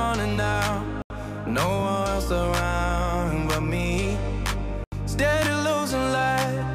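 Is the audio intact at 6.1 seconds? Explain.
Yes, at 6.1 seconds the audio is intact, with no dropout, click, distortion or other fault to be heard at that moment.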